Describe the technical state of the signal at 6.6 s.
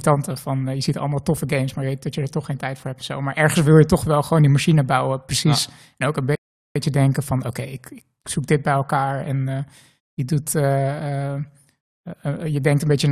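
A rebuffering stall covers 6.6 s, running from 6.35 to 6.76 s, just after "ook een" and before "denken van oké ik". The player ran through its downloaded audio and halted until more data arrived, so the speech drops into flat silence for about 0.4 s and then resumes at exactly the point where it stopped. Nothing is skipped. The pause simply adds 402 ms to the playback.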